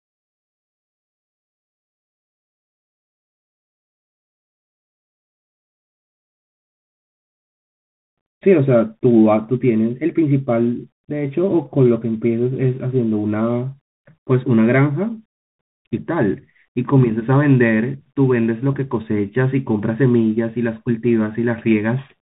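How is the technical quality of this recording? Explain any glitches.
Technical quality is poor throughout because of one fault. The whole clip carries Bluetooth CVSD headset codec damage. This one-bit up-or-down coder, which fits a 64 kbps link, passes nothing above 4 kHz, so a spectrogram shows a hard ceiling there. Its adaptive step can't follow loud high sounds, leaving scratchy s sounds over granular hiss and slope-limited, staircase edges in the waveform.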